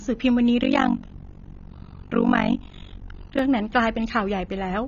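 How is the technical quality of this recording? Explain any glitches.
The quality is poor, with two faults. Throughout, the speech is dull and smeared, likely from low-bitrate AAC compression. Unlike simple low-pass filtering, it has a warbling, fizzy texture. From 0.62 to 3.39 s, overlap-add ripple makes the level pump by about 60 dB around fifty times a second, a rough tremolo rather than slow, irregular dropouts.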